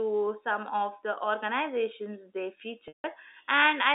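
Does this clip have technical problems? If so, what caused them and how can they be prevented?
Yes. Just after "of the organizations they", from 2.88 to 3.04 s, there is packet loss with pitch repetition. About 160 ms of audio goes missing, which fits eight lost 20 ms packets. The receiver fills the gap by repeating the last pitch period. That held, buzzy tone fades out over about 50 ms, leaving silence until the speech cross-fades back in. The G.711 telephone band around it is unaffected. To prevent this, use a larger jitter buffer, forward error correction or a less congested network path.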